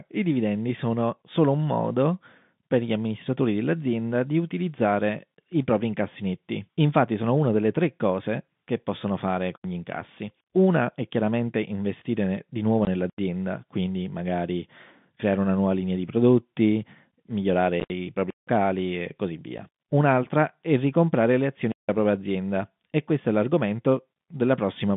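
At 9.56 to 9.64 s, between "cose che possono fare" and "gli incassi", the sound cuts to an 85 ms hole with hard edges. This is a block of digital silence: zeros replaced audio when the output buffer went unfilled, which fits a 4096-sample buffer.

At 12.85 to 12.87 s, after "chiaramente investire di nuovo", a 20 ms gap cuts in and out. This is packet loss filled with silence, the lost packets played back as nothing.

At 13.10 to 13.18 s, just before "quindi magari creare una", another 85 ms block of digital silence appears, again consistent with a 4096-sample buffer.

Around 17.8 to 17.9 s the sound is chopped by several hard-edged holes totalling 80 ms across 100 ms, the longest 60 ms. The pattern points to lost 10 ms packets replaced with silence.

At 18.30 to 18.48 s a longer 171 ms block of digital silence opens, which fits an 8192-sample buffer.

At 19.58 s a single 10 ms packet drops out, leaving a short hole.

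At 21.72 to 21.89 s a second 171 ms block of digital silence cuts the audio.

Throughout, the G.711 telephone coding keeps the sound within its narrow telephone band of roughly 150 Hz to 3.6 kHz.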